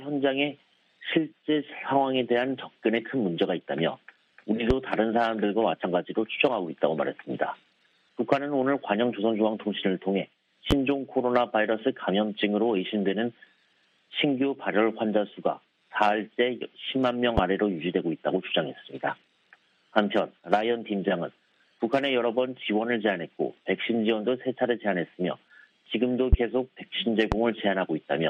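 The audio carries five loud pops, at 4.70–4.74, 10.71–10.74, 17.38–17.41, 26.33–26.36 and 27.32–27.35 s. Each is a single sharp transient about 20 dB above the surrounding signal, which continues underneath. The likely cause is a voltage step from a switch, connector or static discharge.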